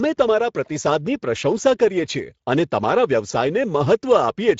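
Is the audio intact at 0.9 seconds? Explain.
No, at 0.9 s the whole speech clip carries Speex codec damage: a hoarse, noisy CELP excitation, fitting roughly 16.8 kbps, with nothing above 7.6 kHz, rather than MP3's swirly smearing.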